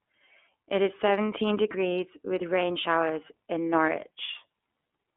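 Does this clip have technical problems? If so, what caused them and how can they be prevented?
Yes: iLBC codec damage runs throughout, with the sound confined to roughly 250 Hz–3.5 kHz and coded in independent 30 ms frames, which fits iLBC's 13.33 kbps mode. Unlike simple band-limiting, this adds a rough, synthetic grain. Prevent it by using a wideband codec such as Opus.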